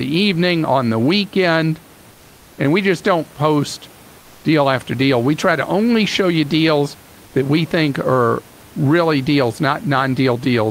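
Comfort noise in place of the background appears from 4.19 to 4.43 s, a 240 ms pause where the room noise, sitting about 28 dB below the speech, gives way to a smooth, featureless hiss about 2 dB quieter. The likely cause is Opus discontinuous transmission: the sender stopped transmitting once it judged no speech was present, and the receiver filled the gap with synthetic noise roughly matched to the background, losing the room's natural texture until sound resumed.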